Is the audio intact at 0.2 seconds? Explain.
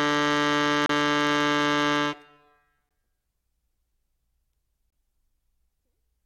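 Yes, the music plays through 0.2 seconds without any dropout, click, distortion or other fault.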